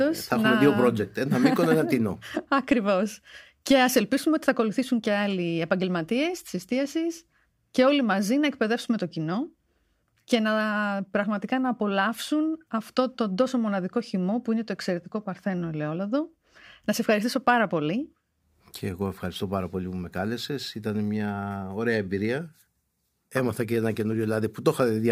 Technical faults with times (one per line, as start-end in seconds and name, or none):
none